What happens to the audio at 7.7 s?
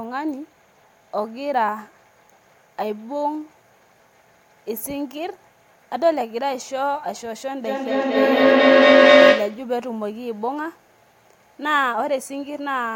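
At 7.7 s a feedback howl is building. It runs from 7.65 to 9.76 s, when a microphone-to-loudspeaker loop keeps adding level each trip. It settles into a tone around 500 Hz, pulsing roughly every 200 ms, peaking about 12 dB above the speech. A spectrogram shows one bright, thickening horizontal band. The waveform's envelope swells and throbs.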